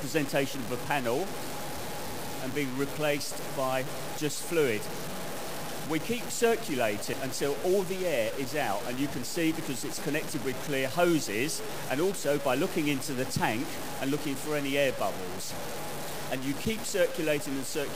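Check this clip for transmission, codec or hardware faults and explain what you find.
Two faults are audible.

Low bit depth without dither runs throughout. The grainy distortion follows the sound, with error only around 10 dB below it. This is likely caused by truncation to about 5 bits.

Damaged data in a compressed stream occurs at 7.13 s and 16.89 s. Corrupted frames made the decoder misread and resynchronise, leaving a brief disturbance at each point.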